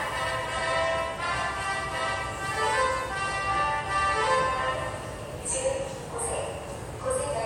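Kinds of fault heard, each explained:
No technical fault can be heard anywhere in this recording of sounds. There is nothing to list under any kind of fault.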